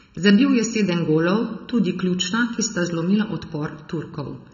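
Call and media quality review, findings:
Channel delay (comb filtering), throughout the clip. Speech sounds hollow and phasey, with fixed notches near 700 Hz, 2.1 kHz and 3.5 kHz. One channel trails the other by under a millisecond before mono summing, so the shared signal cancels at evenly spaced frequencies. Probable component: stereo-to-mono downmix or capture path.

AAC compression, throughout the clip. Dull, smeared speech with plainly audible coding damage: warbling on sustained sounds, fizzy sibilants, and nothing above 6.9 kHz. The hard band limit points to AAC-LC encoding at about 24 kbps, likely the cause. Probable component: media encoder or transport transcode.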